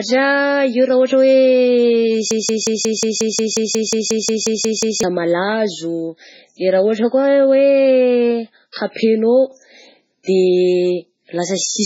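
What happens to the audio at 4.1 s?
At 4.1 s the audio is stuck in a broken-record loop that runs from 2.31 s to 5.03 s and ends just before "malazo de". A fragment of about 0.18 s plays exactly, back to back, 15 times, which likely means the player or stream stalled and kept resending the last piece it held. The result is a rapid stuttering repetition, and the audio that should have filled those seconds is lost.

Under the loop, and across the whole clip, is heavy MP3 compression. Nothing reaches above 7.6 kHz, so the sound is dull and missing its top end. Weak frequency lines flicker on and off from frame to frame, giving a watery, swirling texture, and sharp consonants come out as metallic chirps with smeared onsets. That depth of damage fits a very low bitrate of around 16 kbps.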